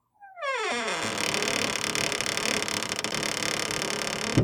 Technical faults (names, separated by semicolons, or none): broken MP3 bit reservoir; dropped samples